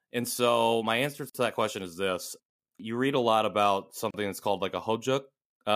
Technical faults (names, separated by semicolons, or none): gap at a join of encoded pieces